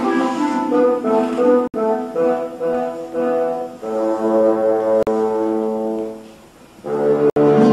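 The audio cuts to silence three times, at 1.68 to 1.74 s, 5.03 to 5.07 s and 7.30 to 7.36 s, gaps of 64, 43 and 64 ms, then resumes further along. This is likely a Bluetooth dropout, where a few packets arrived too late and were discarded.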